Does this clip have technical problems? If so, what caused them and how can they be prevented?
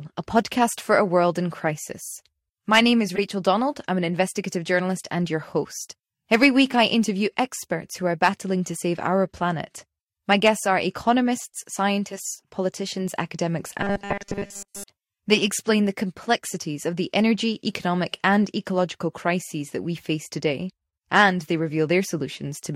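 Yes. There are two faults.

The first is a corrupt frame decoded, from 3.09 to 3.19 s. It sounds like a chirp, squeak, blip or burst of noise. Damaged bits in the compressed stream were played instead of discarded. Misread gains and codes put energy at the wrong frequencies for the span of each bad frame, and about four frames were hit. To prevent it, check each frame's integrity and conceal failed frames rather than decoding them.

The second is robotic sound from repeated short buffers, from 13.81 to 14.84 s, just after "economists scientists politicians academics". The sound turns into a stiff, metallic buzz at 200 Hz that still loosely tracks the speech. The likely cause is audio arriving too slowly. Playback kept looping the last 5 ms of sound, and that loop sets the 200 Hz pitch. Most of the real audio in that stretch, around 70 percent, was replaced by repeats. To prevent it, use a deeper jitter buffer and real packet-loss concealment instead of short loops.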